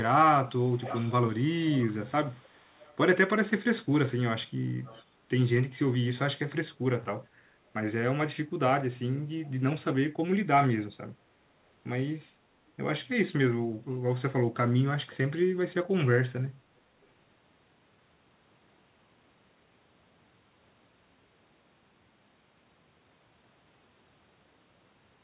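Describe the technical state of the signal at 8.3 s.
At 8.3 s the speech is intact, with no dropout, click or distortion, only the steady band-limited sound of the call path, which has nothing above 4 kHz and fits a narrowband telephone-grade codec.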